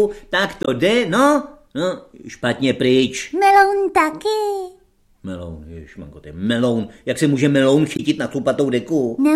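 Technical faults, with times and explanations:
0.63–0.68 s and 7.95–8.00 s, damaged data in a compressed stream: two short bursts of about 50 ms each, where the decoder hits corrupted frames, misreads their contents and loses sync until it finds a valid frame header. What comes out is a brief chirp, squawk, click or short hole.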